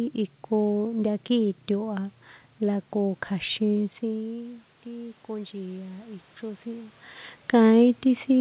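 From 4.09 to 7.03 s, automatic gain rising is audible. The talker moves back around 4 s and the input drops by about 14 dB. The gain control responds by slowly adding about 6 dB, so voice and room noise swell together over roughly three seconds.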